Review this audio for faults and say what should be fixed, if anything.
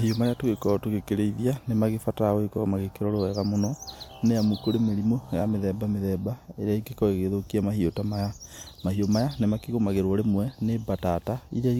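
No faults found in this speech recording; nothing needs fixing.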